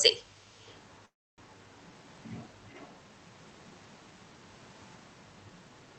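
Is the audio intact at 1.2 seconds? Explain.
No. From 1.05 to 1.40 s there is a call audio freeze, likely from delayed packets emptying the jitter buffer. The last sound smears into a brief fading buzz or hiss, then silence: a flat waveform and blank spectrogram gap before the audio resumes intact.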